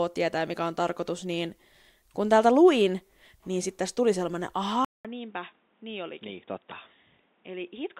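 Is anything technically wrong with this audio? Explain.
Yes. At 4.85 s the recording likely switched its input to a poorer device, after a 0.2 s silence. That device passes nothing above 3.8 kHz, so the speech turns dull and boxy for the rest of the clip. It is also about 10 dB quieter and brings its own faint background noise.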